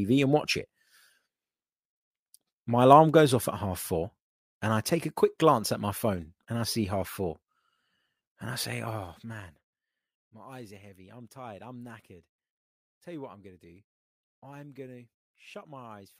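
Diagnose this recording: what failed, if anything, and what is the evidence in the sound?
Zipper noise occurs in the gain stage of the processing chain, from 8.87 to 9.82 s, just after "I say". The level drops by about 20 dB in 2 dB steps at roughly fifteen steps a second, and each step is an abrupt gain jump that leaves a small click, so a ticking rasp rides on the speech throughout the fade. This points to gain being updated once per buffer without interpolation.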